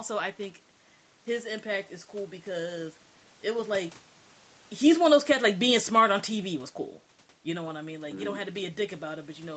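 Automatic gain falling, from 4.71 to 6.13 s: the call's automatic gain control judged the input too loud, or its background noise too strong, and lowered its gain gradually, by about 4 dB over that stretch. The level sinks steadily rather than stepping down, and the room noise behind the speech sinks with it, which separates it from the talker's movements around 3.5 s and 7 s, where only the voice itself changes in level.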